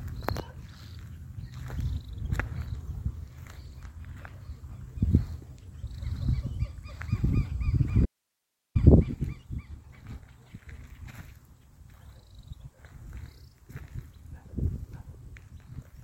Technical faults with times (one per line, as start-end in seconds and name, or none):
8.06-8.75 audio dropout to a faint residue